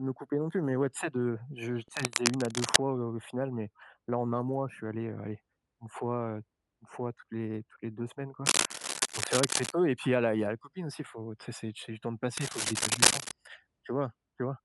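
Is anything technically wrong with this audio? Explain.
Yes. Three bursts of cable scratch noise sit over the speech: from 1.88 to 2.76 s just after "je tu", from 8.45 to 9.72 s just before "et puis il y", and from 12.37 to 13.31 s just after "c'est du temps de". Each is a dense, uneven rustling and crackling about as loud as the speech, and a little louder in the last burst. The likely cause is a worn cable, connector or control being moved, so that its contact resistance jumps around rapidly and breaks into the signal.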